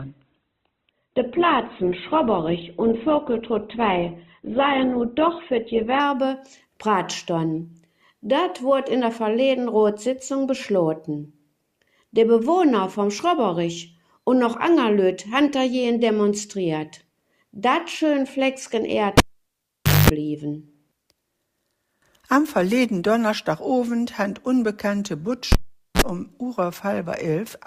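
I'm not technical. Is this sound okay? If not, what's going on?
No. From 0 to 6.0 s you hear an adaptive stream starting at a low bitrate: the player began on a cheap, small version of the audio to start quickly, so it sounds dull and muffled, with no sparkle. At 6.0 s it switches to a better version and clears up suddenly, with no gap.

There are two moments of a cable pulled and plugged in, at 19.18 to 20.1 s and at 25.52 to 26.02 s. Each starts with a pop and then near silence, for about 0.9 s the first time and about 0.45 s the second. A short, low mains buzz follows while the plug is only half in, and a second pop comes as the sound returns.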